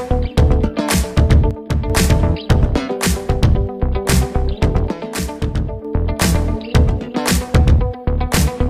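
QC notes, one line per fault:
1.51–1.90 s and 4.87–5.85 s, one channel drops out: level steps abruptly down about 6 dB, a sharp notch in the waveform envelope, likely one stereo side lost.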